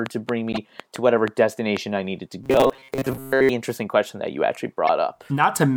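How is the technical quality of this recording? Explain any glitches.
The recording has clear technical problems. Three kinds of fault affect the speech.

From 0.06 to 1.78 s there is a train of clicks. About seven clicks arrive, roughly 3.5 per second, at an uneven pace. They stand well above the speech, around 10 dB louder. Each is a short pulse of similar shape. They sound like ticking laid over the voice. They are likely caused by interference from nearby equipment or a faulty connection or power supply.

A corrupt frame decoded appears from 0.52 to 0.58 s. It spans a few compressed frames. Damaged bits made the decoder rebuild the sound with wrong values. Energy landed at the wrong frequencies, peaking fairly loud. It is heard as a brief chirpy burst. A second corrupt frame hits from 4.87 to 4.89 s. That one covers about a single frame and peaks louder still. It is a sharp blip.

From 2.44 to 3.49 s the voice turns robotic. 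This is robotic sound from repeated short buffers. Fresh audio arrives too slowly. The playback repeats the last short chunk to fill the gap, and the real audio is skipped. Most of this stretch is repeated material. The repeats impose a fixed buzz at 134 Hz. That fits a buffer of about 7.5 ms. The speech becomes a metallic drone that only loosely tracks the words. Late audio delivery is the likely cause.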